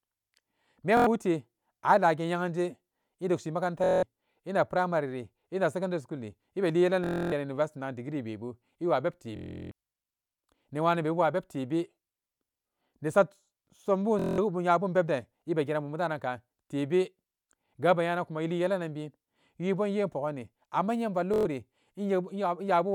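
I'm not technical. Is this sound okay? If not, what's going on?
No. Bluetooth stutter breaks the speech at 0.97, 3.84, 7.04, 9.36, 14.19 and 21.34 seconds. Sound went missing over the wireless link, so a tiny slice repeats as a buzz, then the speech jumps ahead.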